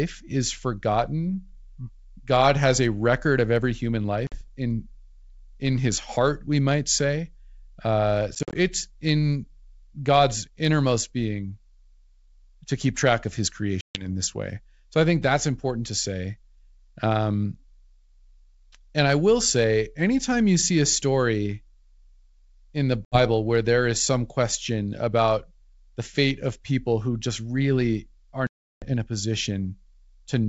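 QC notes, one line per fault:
4.27–28.94 s, packet loss on an ADPCM call: hard-edged silent gaps at 4.27–4.44 s after "record of every human" (50 ms lost), 8.35–8.57 s (110 ms scattered over 200 ms), 13.81–14.07 s before "this way" (140 ms), 23.05–23.18 s (70 ms), and 28.47–28.94 s after "who just really are" (350 ms). Lost packets are replaced by silence, which pulls the decoder's predictor and step size out of step with the sender's. Audio returns with brief slight distortion, then settles.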